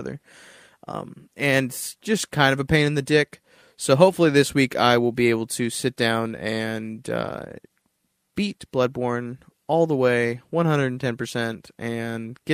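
No technical faults are audible.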